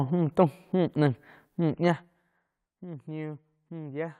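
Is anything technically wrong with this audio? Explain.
Yes. From 1.79 to 2.39 s there's zipper noise: the level drops roughly 15 dB in 2 dB jumps, around ten a second, with no smoothing between them. Each jump leaves a small click, so you hear a ticking rasp riding on the speech.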